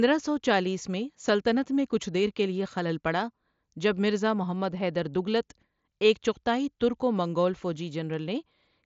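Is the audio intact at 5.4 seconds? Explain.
Yes, the audio is intact at 5.4 seconds, with the speech passing cleanly through the Bluetooth mSBC headset path, whose band stops at about 7.7 kHz.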